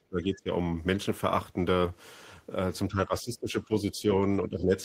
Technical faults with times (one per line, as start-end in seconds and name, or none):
0.00-0.50 speech suppressed in double talk
2.90-4.07 speech suppressed in double talk
4.49-4.76 speech suppressed in double talk